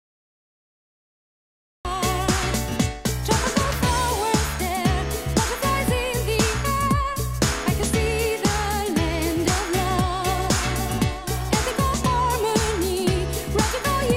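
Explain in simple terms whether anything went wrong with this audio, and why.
Something went wrong at the very beginning. This is a cut-off start. The first 1.85 seconds are silence. At 1.85 seconds the sound jumps in already underway, with no natural build-up. The recording began too late and missed the opening.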